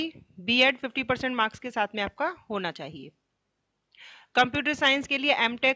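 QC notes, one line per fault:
No faults found.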